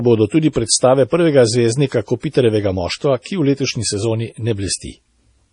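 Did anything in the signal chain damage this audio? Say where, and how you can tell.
Yes, the damage sits at the codec stage. The whole speech clip is band-limited, with nothing above 10.4 kHz, and the sibilants come out watery and swirly, with weak high detail flickering in and out from frame to frame. That heavy MP3 compression damage is likely from an MP3 encode at a low bitrate, something around 32 kbps. The encoder ran short of bits, so it chopped the treble off flat and zeroed the quieter frequency lines.

There's also pre-echo from the same codec, from 0.53 to 0.56 s, just after "bodo tudi" and right before "predstave prvega zvezdnika". A hiss of about 30 ms arrives ahead of the attack, which then sounds softened. The transform block holding that sharp onset had its quantisation noise sized for the loud part, and that noise spread evenly across the block, into the quiet moment before the attack.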